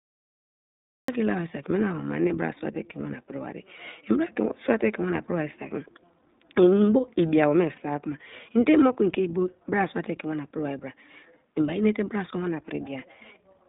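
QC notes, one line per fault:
Throughout: iLBC codec. The speech is confined to a narrow telephone band of roughly 150 Hz to 3.7 kHz and has a plainly audible rough, slightly synthetic edge. Each short block is coded on its own, in a way that fits 20 ms frames at 15.2 kbps, so fine detail of the excitation is lost. A spectrogram shows a hard ceiling near 3.7 kHz with nothing above it and little energy below 150 Hz. Harmonics look smeared, grainy and less clean than in wideband speech.
0 to 1.08 s: cut-off start. The clip opens on digital silence, and the sound then begins abruptly at 1.08 s, partway through an utterance, with no natural attack or onset. The stream or recording evidently started late and joined the speech midway. On the waveform the first 1.08 s is a flat line, followed by a sudden jump to signal. The spectrogram shows a blank stretch, then a vertical edge where energy appears across the band at once.
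2.28 to 2.31 s and 7.76 to 7.79 s: lost iLBC frames. Each event is a single missing block of about 20 ms. The decoder filled it by repeating the last pitch cycle mixed with noise, which produces a brief held, faintly buzzy vowel-like smear. The speech recovers immediately afterwards because each frame is decoded independently. On a spectrogram each gap shows frozen, evenly repeated harmonics with a noisy haze. The waveform shows a short run of near-identical periodic cycles.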